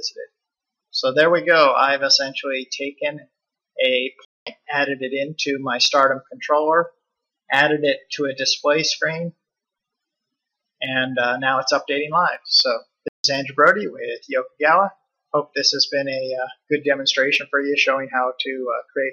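The sound cuts out mid-flow twice, at 4.25 s for about 215 ms and at 13.08 s for about 160 ms, then resumes. These are playback stalls, likely from the player running short of data or its thread being blocked, leaving the output silent until it recovered.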